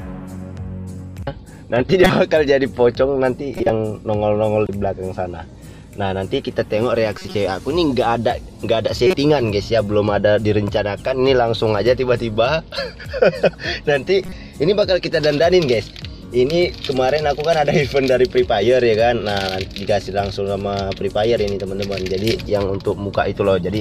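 At 2.04 to 2.12 s, 3.57 to 3.70 s, 4.66 to 4.69 s, 7.18 to 7.35 s, 9.07 to 9.14 s and 14.26 to 14.32 s, corrupt frames are decoded: damaged bits misplace energy in frequency, giving brief chirps and noise bursts, the loudest in the first burst, each lasting only a few frames rather than clicking once.

From 22.18 to 22.49 s, sound and background noise rise together by about 4 dB. This is a sudden gain jump, likely a gain change applied without a ramp. Because the noise floor shifts with the sound, it is distinct from frame corruption.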